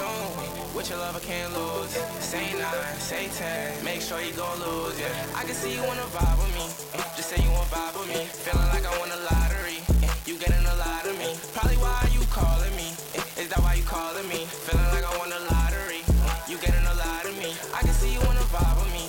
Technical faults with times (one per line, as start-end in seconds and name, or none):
0.00-19.08 unreliable data bit